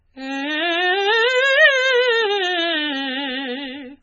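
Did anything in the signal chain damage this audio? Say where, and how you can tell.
Yes. MP3 compression damages the music across the whole clip, most likely at the codec stage. Nothing is left above about 7.4 kHz, so the top end is missing and the sound is dull. The damage is heavy, with a watery, swirling texture and smeared attacks, which points to a very low bitrate of around 16 kbps. Starved of bits, the encoder cut the treble at a fixed frequency and dropped weak spectral lines that flicker between frames.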